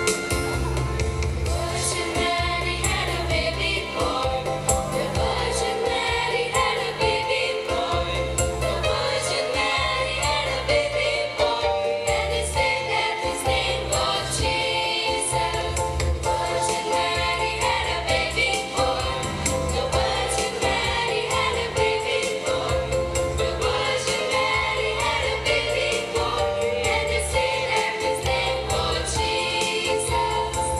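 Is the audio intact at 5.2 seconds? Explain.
Yes, at 5.2 seconds the audio plays through cleanly, with no dropout, click, distortion or other fault at that moment.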